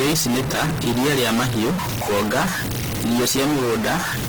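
A short speech clip with two problems running the whole way through. The first sounds like a stuck bit: there's distortion riding on the speech, and the pauses aren't clean either, filling with a gritty noise that tracks the sign of the quiet signal. That's the signature of one data bit likely frozen at a fixed value, from a broken line or a converter fault, so roughly half the samples land off by that bit's weight. On top of that there's plainly audible Opus compression in its music (CELT) mode. The bandwidth stays full, up to about 20.2 kHz, but the detail is rough and grainy rather than swirly, as the encoder keeps each band's energy while filling the content with folded or noise-like material. The amount of damage fits a low rate of around 16 kbps, likely from an aggressive encode setting.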